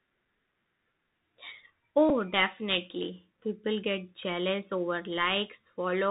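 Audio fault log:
throughout: Bluetooth CVSD headset codec, 64 kHz one-bit delta coding cuts everything above 4 kHz; the spectrogram shows a hard ceiling, scratchy sibilants and granular hiss.
2.09 s: Bluetooth headset packet repeated, about 7.5 ms replayed, fitting two lost packets; the waveform shows a short repeated segment, heard as a brief buzz near 267 Hz.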